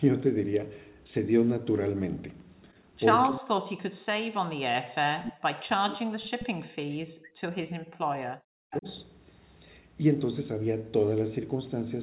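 Speech suppressed in double talk appears from 3.27 to 6.06 s, again from 6.47 to 7.75 s and from 7.92 to 8.86 s. The level sinks by roughly 40 dB at its worst. This is likely an echo canceller that could not tell the near talker from loudspeaker echo while both sides spoke, so it attenuated everything. The dips add up to about five and a half seconds across the three stretches.

An echo leak is heard at 6.39 to 6.45 s and again at 8.72 to 8.94 s. A faint delayed copy of the voice returns about 330 ms behind the original, some 15 dB below it. This is likely residual loudspeaker pickup that the far end's echo canceller failed to remove and sent back down the line. Throughout the clip, the audio stays narrowband below 4 kHz, which fits a 64 kbps G.711 mu-law call path.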